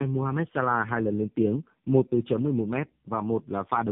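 Tandem speech coding runs through the whole clip. The speech passed through two low-rate speech coders in a row, with a plain telephone-grade link between them, and each coder had to rebuild audio that the previous one had already stripped down. The roughness, dull muffled tone and warble point to something like G.729A at 8 kbit/s feeding AMR-NB at 6.7 kbit/s. Nothing reaches above 3.7 kHz, so sibilants lose their edge.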